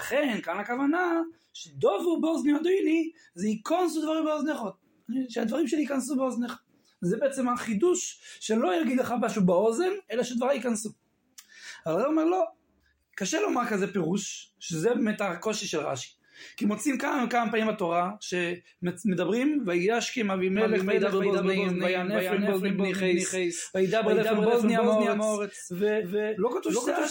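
A doubled audio track appears at 20.56 s and lasts to the end of the clip. From that point a second full-band copy of the sound runs roughly 300 ms behind the first, at about the same loudness, and it switches in abruptly with no decay or room colour. The likely cause is the signal being captured a second time through a slower path and mixed back in. The result is a hard, stuttering echo that repeats every onset.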